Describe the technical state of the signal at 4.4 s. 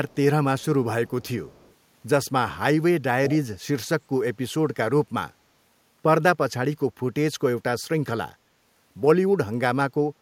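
At 4.4 s the speech signal is intact, with no fault present at that moment.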